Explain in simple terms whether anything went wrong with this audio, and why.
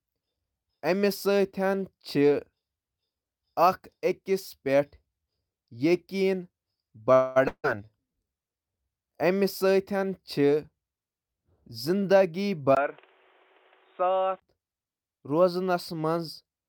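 Yes, a few things went wrong. At 7.13 s the speech smears into a fading buzz for about 0.22 s, then carries on where it stopped. This is likely a call audio freeze, where delayed network packets briefly leave the player with nothing to play.

Right after, at 7.48 s, another buzz trails off into a brief silence, and about 0.16 s of speech is gone when it resumes at 7.66 s. This is likely a long network dropout, where that audio never arrived.

From 12.75 s to 14.42 s, after a tiny gap, the speech turns duller and quieter, with new background noise. The likely cause is the input switched to a poorer device, such as a headset microphone.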